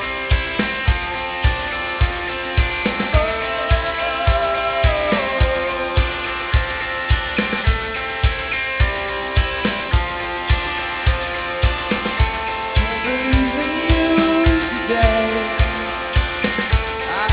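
Aliasing throughout: it sounds dropped to an 8 kHz rate without filtering, so anything above 4 kHz folds back as fairly loud, gritty, metallic tones.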